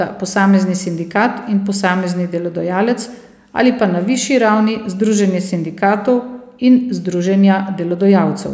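No technical faults are audible.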